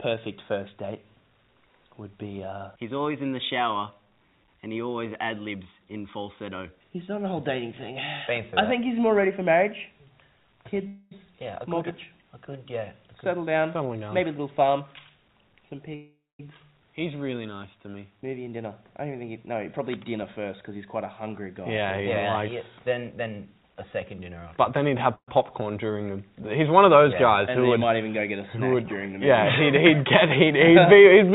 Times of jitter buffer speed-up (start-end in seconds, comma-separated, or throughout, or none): 13.89-15.66, 18.24-20.62, 23.07-23.71, 24.14-24.89